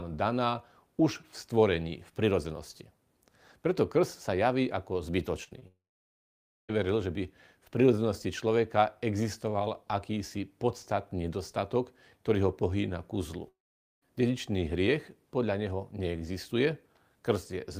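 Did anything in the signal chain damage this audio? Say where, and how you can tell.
Yes, at the network stage. Short concealed packet loss causes brief smears at 5.43 to 5.49, 5.49 to 5.53 and 5.59 to 5.63 s, where 20 to 40 ms gaps were patched by extending the preceding sound.

From 5.67 to 6.71 s and 13.49 to 14.08 s, the sound decays into a fading buzz or hiss and then near-silence for about 0.9 s and 0.47 s before resuming with material missing, likely a long network dropout.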